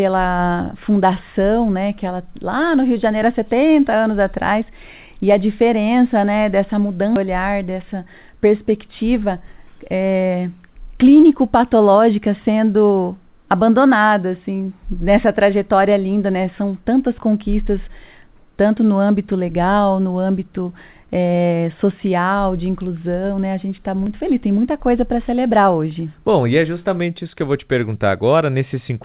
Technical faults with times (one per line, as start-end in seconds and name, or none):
7.16-7.26 skip ahead
7.75-8.36 jitter buffer speed-up